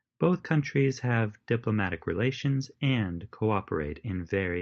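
Nothing here stands out as a fault: the speech comes across as it would on an ordinary call, with the high end topping out around 8 kHz, which fits a call codec like Opus running at wideband.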